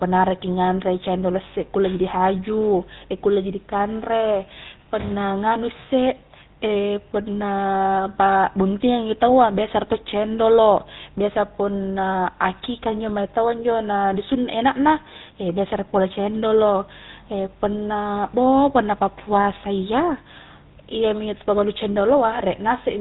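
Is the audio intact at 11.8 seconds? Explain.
No, the speech at 11.8 s, like the whole clip, carries GSM full-rate codec damage: pulse-driven vocal-tract modelling leaves a buzzy, gravelly roughness, unlike plain telephone band-limiting, alongside nothing above 4 kHz.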